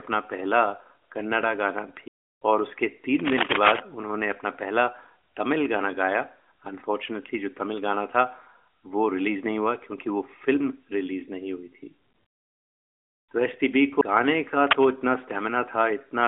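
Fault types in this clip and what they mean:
CD skip: the laser jumps to another turn of the disc's spiral, heard as brief mutes of about 15 ms at 2.08 s and 10 ms at 14.01 s before playback resumes elsewhere.
Cable scratch noise: rustling, uneven noise bursts around the speech level from 14.67 to 14.90 s, likely from a worn cable or connector whose contact resistance changed rapidly.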